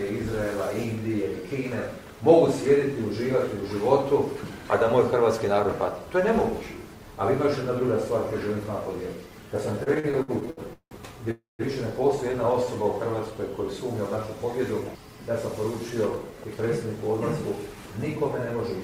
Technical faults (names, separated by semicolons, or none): repeated stalls (stutter); call audio freeze; jitter buffer speed-up